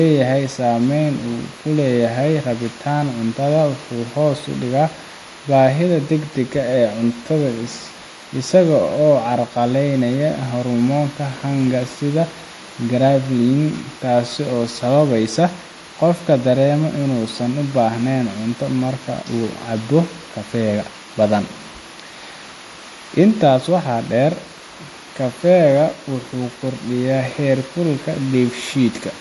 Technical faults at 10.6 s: MP3 compression

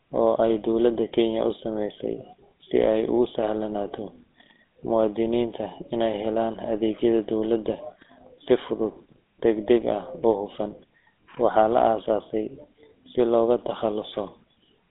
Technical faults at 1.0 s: GSM full-rate codec

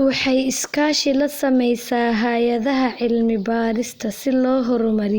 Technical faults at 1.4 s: none

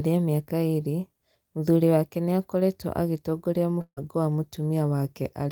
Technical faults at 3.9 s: long network dropout

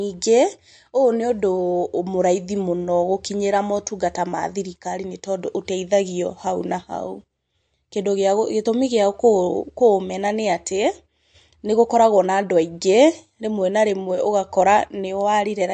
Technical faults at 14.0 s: MP3 compression

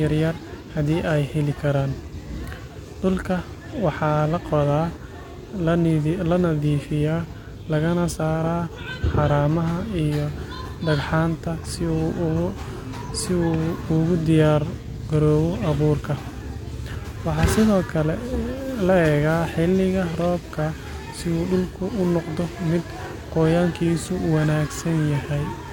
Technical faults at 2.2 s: none

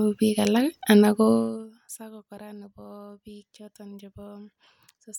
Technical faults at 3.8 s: none

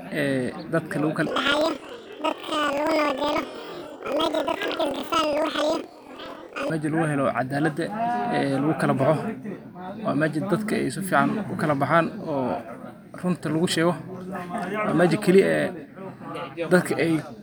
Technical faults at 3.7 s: planar audio read as interleaved

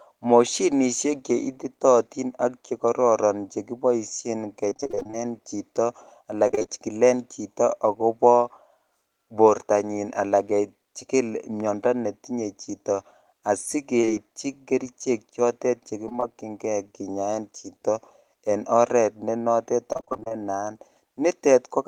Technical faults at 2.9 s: none

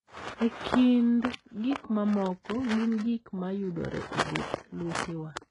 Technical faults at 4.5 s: HE-AAC compression

